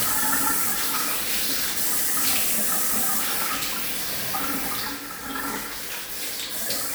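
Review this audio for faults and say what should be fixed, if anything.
Nothing needs fixing; no faults can be heard.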